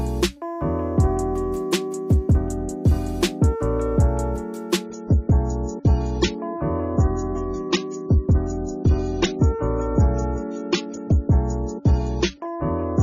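Adaptive stream at a lower bitrate, from 4.84 s to the end: the sound abruptly loses its top end, with nothing above 7 kHz, and grows more obvious coding artefacts. No gap accompanies the change. The player has switched to a lower-quality rendition mid-stream, likely because the connection slowed, and the sudden dulling fits a move from around 96 kbit/s AAC down to roughly 16 kbit/s.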